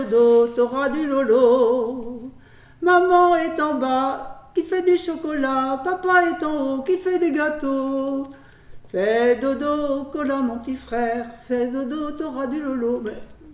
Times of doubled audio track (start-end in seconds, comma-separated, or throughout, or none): none